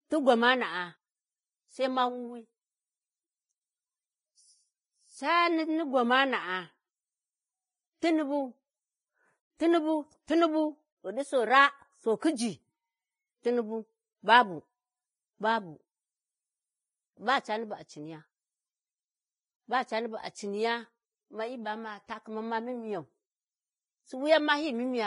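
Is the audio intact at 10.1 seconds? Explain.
No. At 10.1 seconds, as across the whole recording, the speech carries heavy Vorbis compression damage, likely from a low bitrate near 18 kbps. Nothing sounds above about 10.6 kHz. Coarsely quantised treble turns into hiss and grain, roughening tones and blurring attacks.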